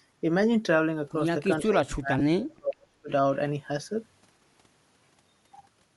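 A speech recording carries a grainy, breathy edge from start to finish, with smeared high-frequency detail and a noise-like fill in the upper band. The codec damage is plainly audible and is likely Bluetooth LC3 compression, with a texture consistent with roughly 48 kbps and 7.5 ms frames. From 1.62 to 3.1 s the voice is pushed down in pieces, dipping by as much as about 40 dB. That pattern points to speech suppressed in double talk, where the echo canceller treats overlapping far-end sound as echo and attenuates the talker along with it. Inside that stretch, at 2.19 to 2.21 s, there is a brief dropout. It comes from lost LE Audio frames, which fits two missing 7.5 ms frames that the decoder concealed by repeating the last spectrum with randomised signs.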